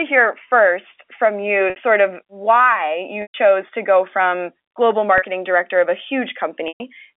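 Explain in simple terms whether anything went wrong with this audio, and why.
The speech drops out four times from packet loss with pitch repetition, where the receiver loops the last bit of voice to cover each gap. This happens at 1.70 s (after "hear first from"), 3.22 s (before "to go from global"), 5.18 s (before "director of a") and 6.68 s, with gaps lasting 40 to 120 ms. The shorter ones sound like a brief held buzz, while the longer ones fade into silence before the speech returns.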